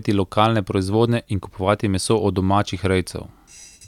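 Nothing stood out as a technical fault on listening to this speech recording.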